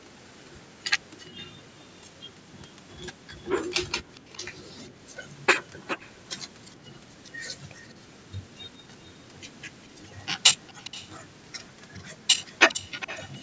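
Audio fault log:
3.89–4.38 s, 5.62–6.42 s, 7.83–7.94 s, 10.6–11.1 s and 11.54 s to the end: echo leak. A delayed copy of the speech trails the original by 408 ms. It is very faint at first and much stronger in the last two stretches, likely because a far-end loudspeaker fed back into its microphone past an incomplete echo canceller.
6.76–6.87 s: background gated by the echo canceller. The room sound dips by about 15 dB for roughly a tenth of a second. The canceller clamps the microphone down while its loudspeaker plays, then releases it, so the background briefly hollows out and returns.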